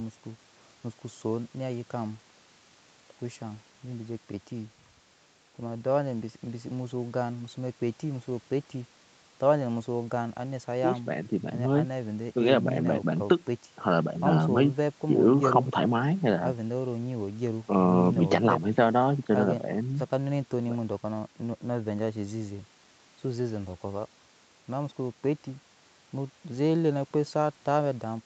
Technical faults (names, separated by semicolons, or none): none